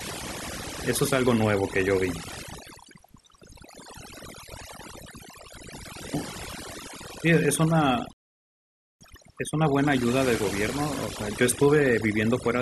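From the start, overdone noise removal is at work. Bands near the noise floor are cut hard, so the background sparkles and breaks into specks.

At 8.13 s a rebuffering stall begins. The player ran dry and fell silent until 9.01 s. It then resumed exactly where it stopped, adding about 0.88 s.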